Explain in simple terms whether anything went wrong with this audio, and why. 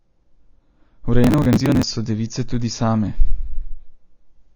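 Yes, two things went wrong. The recording was likely squeezed with AAC compression at a low quality setting, which throws away detail to save space. Nothing above 6.9 kHz survives, so the speech sounds dull and muffled, with a smeared, fizzy texture throughout.

From 1.24 to 1.83 s, just before "so device tudi", there is processor overload crackle. The computer fell behind and skipped dozens of tiny audio chunks, each around 10 milliseconds long, in a row. Each skip leaves a hard-edged gap, and together they sound like gritty crackling.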